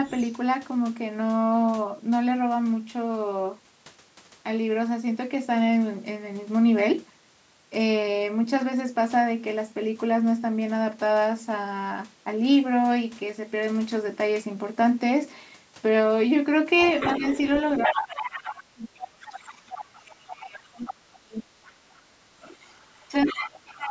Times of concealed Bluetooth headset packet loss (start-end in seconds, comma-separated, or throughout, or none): none